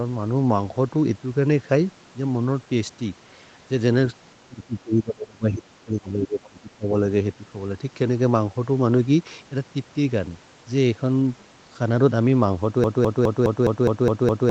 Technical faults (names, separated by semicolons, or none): speech suppressed in double talk; broken-record loop